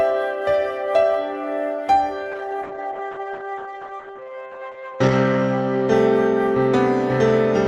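Music with a call bitrate drop from 2.32 to 6.47 s: highs collapse to about 8 kHz and texture turns watery, fitting roughly 10 kbps, unlike a steady lowpass filter.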